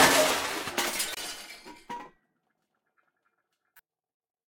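A corrupt frame was decoded at 1.14 to 1.17 s, a brief burst of damaged sound, such as a chirp, squeak, blip or noise, peaking around -25 dBFS, about two frames long, then again at 3.77 to 3.80 s as a fainter one near -40 dBFS. Damaged bits were played anyway, scattering energy across wrong frequencies.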